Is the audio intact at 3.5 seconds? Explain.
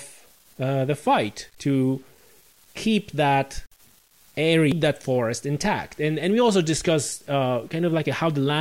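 No. At 3.5 seconds, as throughout, the speech carries grainy, signal-following distortion, likely low bit depth without dither consistent with 8-bit truncation, leaving noise roughly 35 dB down, staircase-stepped waveforms, and a speckled spectrogram floor.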